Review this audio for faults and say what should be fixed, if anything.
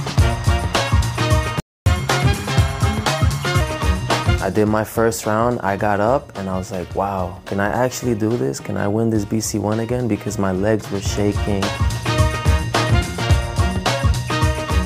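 A playback stall silences the output from 1.6 s to 1.86 s, a gap of about 0.26 s in mid-flow. The likely cause is the player's buffer running dry or its audio thread being blocked, after which output resumes. Prevent it with a deeper playback buffer and a dedicated, high-priority audio thread.

Catch-up at higher speed follows from 1.86 s to 3.61 s: the player resamples its backlog at 1.15 times normal speed, raising pitch by roughly two semitones, before dropping back to normal rate. Prevent it by absorbing the lost time with time-stretching that keeps the pitch unchanged, or by skipping ahead for live audio.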